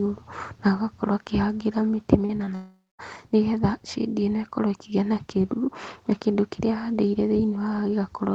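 A speech recording carried over a call link, with a cluster of short concealed packet losses at 2.25 to 2.31 s, 2.37 to 2.41 s and 2.45 to 2.49 s, losing about 40 ms, then 20 ms and 20 ms of audio. Each gap was bridged by extending the preceding sound and cross-fading back, so the speech briefly smears or flutters. On a spectrogram these show as short patches of stretched, overly regular harmonics or blurred noise. The waveform has small, smooth bridges in place of the natural detail. A long network dropout follows from 2.55 to 3.01 s, about 0.44 s with nothing received, likely caused by a burst of lost or late packets. The receiver first continues the last sound as a fading buzz. The final 0.2 s or so sinks toward the quiet room-noise floor, about 44 dB below the speech. Speech then resumes with that stretch missing. In the waveform this appears as a decaying tail and a flat low segment. 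On the spectrogram it looks like smeared bands fading into near-blankness. The whole clip is band-limited at 8 kHz, which fits a narrowed Opus call path.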